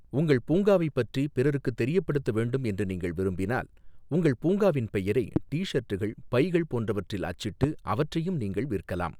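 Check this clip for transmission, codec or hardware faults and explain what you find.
Two hardware faults appear, both the same kind. Loud pops at 5.36–5.39 s and 7.63–7.66 s: single sharp thumps roughly 15 dB above the speech, which continues underneath, likely from a voltage spike from a plug, switch or static discharge.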